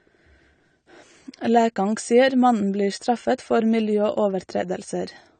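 From start to finish the speech sounds dull and smeared, with nothing above 9 kHz and a fizzy, warbling edge on sibilants. The likely cause is AAC compression at a low bitrate, which fits AAC-LC at around 32 kbps trimming the top band and coarsely quantising the rest.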